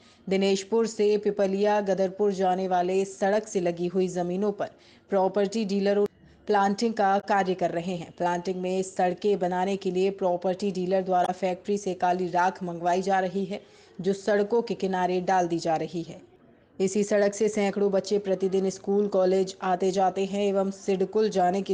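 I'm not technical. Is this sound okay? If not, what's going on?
No. Two brief glitches interrupt the sound, at 7.20 to 7.24 s and 11.25 to 11.29 s. This is damaged data in a compressed stream: corrupted bytes confuse the decoder until it resyncs.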